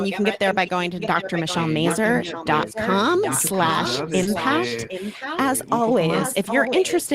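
From the start to 5.38 s, a delayed copy of the speech trails the talker by about 0.76 s. This is an echo leak. The far end is likely on a loudspeaker, and its echo canceller let part of the playback back into its microphone. The copy sits roughly 10 dB below the direct speech. It sounds like a faint second voice running behind the first.

At 1.13 s there is a lost packet rebuilt from error correction. One 20 ms packet went missing. The next packet carried a coarse copy of it, and the decoder played that instead. There is no gap. That frame sounds a little rougher and grainier.

From 2.13 to 2.45 s the talker's level sags. This is speech suppressed in double talk. Both sides were likely speaking at once. The echo canceller could not tell the talker from the loudspeaker echo, so it turned everything down. The dip reaches a few decibels at its deepest. It affects about 0.2 s in all, and the speech sounds briefly pulled back.

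From 4.23 to 4.27 s there is a short concealed packet loss. A 20 ms stretch arrived too late to decode. The receiver filled it by extending the sound just before it, then blended back into the real audio. It is heard as a tiny smear or wobble. Inside that window, at 4.25 s, a further packet was rebuilt from error correction, adding the same brief roughness.

From 5.76 s to the end, the echo leak returns with the same 0.76 s delay. The loudspeaker echo again likely gets past the canceller at the far end. This time it is much louder, only about 5 dB below the speech.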